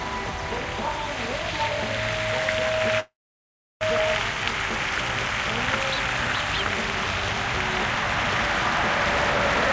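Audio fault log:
3.00–3.83 s, call audio freeze: the sound trails off, goes silent for about 0.7 s, then picks up right where it stopped, likely from a stalled jitter buffer.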